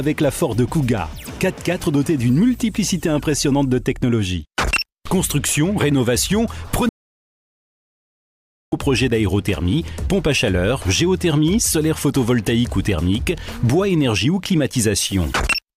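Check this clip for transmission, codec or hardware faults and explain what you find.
An audio dropout to silence runs from 6.89 to 8.72 s. For about 1.8 s the sound cuts off abruptly, leaving silence with no room tone, before resuming mid-flow. The likely cause is the input signal being lost while the recorder kept writing zeros.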